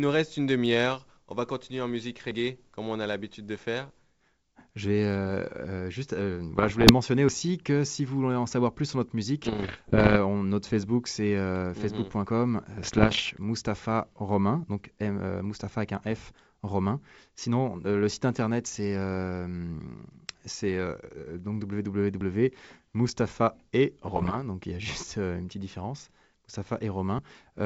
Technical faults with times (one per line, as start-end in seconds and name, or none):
2.31 audio missing between chunks
6.56-6.92 bit errors on an ADPCM link
7.29 audio missing between chunks
9.44-10.17 bit errors on an ADPCM link
12.26 audio missing between chunks
12.75-13.30 bit errors on an ADPCM link
22.21 audio missing between chunks
24.06-24.44 bit errors on an ADPCM link
27.19 audio missing between chunks